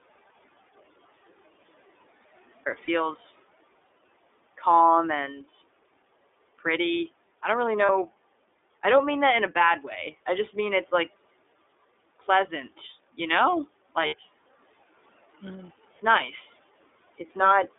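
Speech, heard through the iLBC codec for its whole length. The band runs only from 300 Hz to 3.6 kHz, and the voice has a slightly rough, synthetic edge. That roughness, together with the narrow band, fits iLBC coding each 30 ms frame on its own, at a rate that points to its 13.33 kbps mode. Room noise sits about 23 dB under the speech. The clip opens in an audio dropout to a faint residue that is already under way and lasts until 2.66 s. Only mains hum is left, far below speech level. The speech then returns abruptly rather than fading in, which tells it apart from a pause. The likely cause is a lost signal ahead of a live input. Lost iLBC frames occur at 2.84–2.89 s, at 7.86–7.90 s just after "pretty I don't really", and at 14.07–14.15 s just after "you know". The last of these covers about 60 ms. Each gap is filled by a brief buzzy, held vowel-like sound rather than silence, and the voice recovers at once because each frame stands alone.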